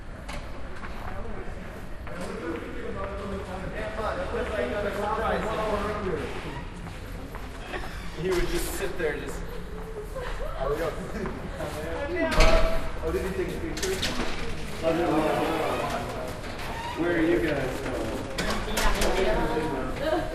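Sounds run through the whole clip with plainly audible MP2 compression damage. Upper frequencies sound dull and flicker in and out as sub-bands drop. The remaining bands carry a gurgling, granular grit. This likely comes from MPEG Layer II coding, which fits about 80 kbps.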